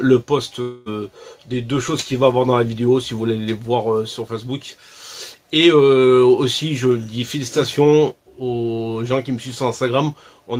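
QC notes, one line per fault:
0.61–0.89 s, long network dropout: The sound turns into a fading buzz for 243 ms, with no full silence. Then it resumes, but 240 ms is missing. The likely cause is a stalled stream, with the receiver stretching the last sound over the gap.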